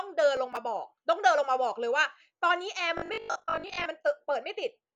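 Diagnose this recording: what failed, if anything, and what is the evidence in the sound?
From 0.37 to 0.57 s, a gritty burst of crackle rides over the speech and then clears. This is processor overload crackle at the driver or buffer stage. The processor fell behind and missed a run of audio buffer deadlines, around five of them, each roughly 10 ms long. Every missed buffer was simply skipped, so the audio jumps forward with a hard edge at each gap. That string of small discontinuities is what produces the tearing texture.

Between 2.98 and 3.86 s, the speech turns into a rigid, metallic buzz at a fixed 50 Hz, while its rough shape still follows the talker. This is robotic sound from repeated short buffers. It likely comes from the driver or buffer stage receiving new audio too seldom and filling the gaps by replaying the last fragment. A 50 Hz buzz fits a repeated 20 ms chunk. About half of the audio in that span is repeated material, and the real audio it replaced is lost.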